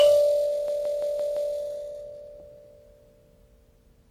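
From the start the music sounds washy and ringing, with hiss swelling and fading alongside it, most likely WMA compression at a low bitrate smearing quantisation noise across long blocks.

From 0.68 to 1.54 s, a 171 ms slice repeats five times as a stutter at about 5.9 Hz. This is a system hang loop: the sound hardware kept replaying a buffer, which fits an 8192-sample buffer.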